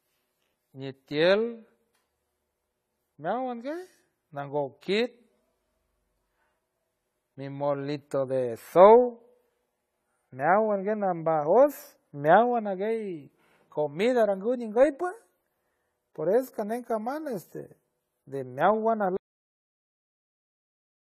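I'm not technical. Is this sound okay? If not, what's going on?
No. Throughout, the speech sounds dull and smeared, with a watery, fizzy edge on hiss-like sounds, and the brightest, airiest part of the sound is missing. That points to AAC compression, likely squeezed hard to save space, which throws away detail the ear supposedly won't miss.

At 19.17 s, right after "de meowan", the audio stops dead mid-sound and drops to total silence for the rest of the clip. This is a cut-off end: the final stretch of the recording was never saved, so nothing fades out naturally.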